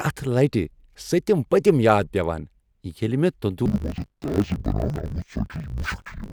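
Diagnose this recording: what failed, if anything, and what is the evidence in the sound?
Sample-format conversion fault: interleaved audio read as planar from 3.66 s to the end. Each 20 ms block's halves are misassigned, giving dull, robotic speech buzzing at 50 Hz.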